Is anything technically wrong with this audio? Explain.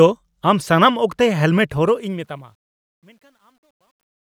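Yes. There's truncation distortion on the fade-out. The fade runs down to the end at 4.25 s, and from 1.7 s onward the quiet tail gets grainy. From 2.59 s to 4.25 s it's at its worst: gritty. The fade stage is throwing away low bits without dither, which fits about an 11-bit path, so the decaying speech collapses into coarse square steps.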